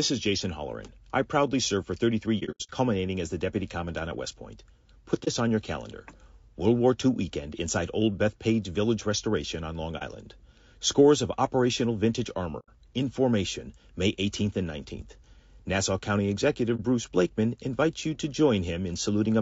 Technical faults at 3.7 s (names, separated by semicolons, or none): low-delay AAC compression